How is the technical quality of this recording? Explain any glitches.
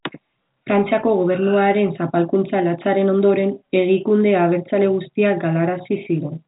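No glitches are audible; the speech carries the narrow telephone band of G.711 coding, with nothing above about 3.8 kHz, consistent with a standard 64 kbps A-law line.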